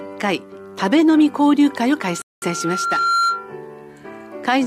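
Loudspeaker feedback squeal, from 2.01 s to 3.55 s: a microphone is picking up the loudspeaker it drives, and around 1.4 kHz the loop returns more than it sends. That one frequency reinforces itself on every pass, so a thin tone appears and swells over about a second until it is roughly as loud as the sound underneath. It then sits as a steady howl until 3.55 s, when the loop is broken.

Rebuffering stall, from 2.22 s to 2.42 s, inside the rising squeal: the player ran out of downloaded audio and waited for more. Everything, including the building tone, drops to silence for 0.20 s, then carries on from exactly the point where it stopped. No audio is lost, but the gap adds that 0.20 s to the playback, stretching the squeal's ramp with a short hole in it.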